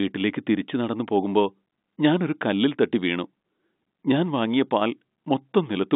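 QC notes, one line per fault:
No faults heard.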